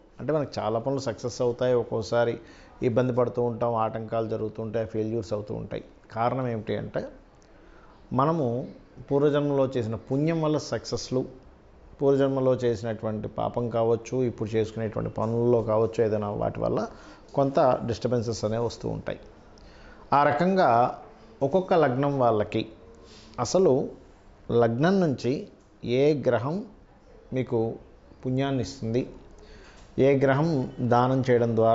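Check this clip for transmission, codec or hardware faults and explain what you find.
No faults found; nothing in this audio points to a problem anywhere in the signal chain.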